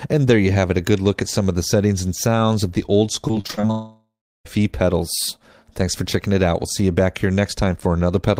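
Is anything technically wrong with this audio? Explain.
Yes. From 3.27 to 3.71 s there is repeated packet loss, giving a choppy, robotic sound. Eight short holes fall in this stretch, the longest about 23 ms. Each hole is filled by stretching the sound just before it. About 156 ms is patched this way, around 36 percent of the span. The real audio in those holes is gone. The patching gives the stretch its broken, mechanical texture.

From 3.71 to 4.47 s comes what is likely a long network dropout. No fresh audio arrives for about 740 ms. The last sound is carried on and fades away. Around 350 ms of the gap is silent. The audio then resumes at 4.47 s, but the missing portion never returns. What played during the gap was a continuation, not the original sound.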